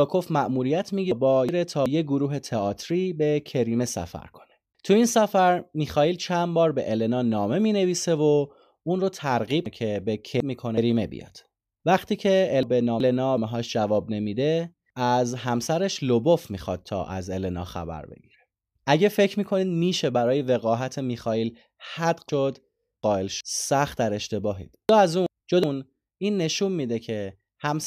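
Five chunks out of order events occur, at 1.12–1.86 s, 9.66–10.77 s, 12.63–13.38 s, 22.29–23.41 s and 24.89–25.64 s. In each, a 0.37 s chunk of the speech arrived late and plays after chunks that should have followed it: one chunk at the first, third and fifth events, two at 9.66 s and 22.29 s. No audio is lost, but the sequence is wrong and each event carries three hard joins, so these moments sound jumbled.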